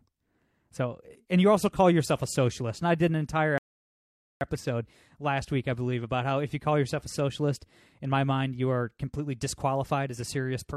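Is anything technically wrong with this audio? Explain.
Yes. A rebuffering stall at 3.58 to 4.41 s: playback ran dry of downloaded data and halted, leaving 0.83 s of silence before the speech resumes exactly where it stopped.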